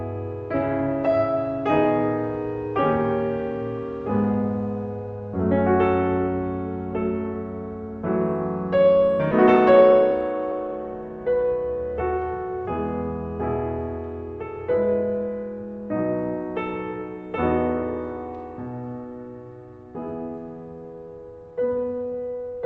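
At 9.31 s about half a second of music was dropped while later audio was already waiting, causing a skip ahead. Playback jumps forward with no filler, so the passage on either side is butted together abruptly and the musical line loses a chunk.

From 9.54 to 10.11 s the buffer was still holding more audio than its target, so the receiver trimmed short pitch-period pieces in quick succession, roughly 50 ms in all, a jitter buffer speed-up. The music runs about 8% fast at unchanged pitch, briefly rushing the tempo. Throughout, the call codec's band limit at 8 kHz is audible as missing top-end air.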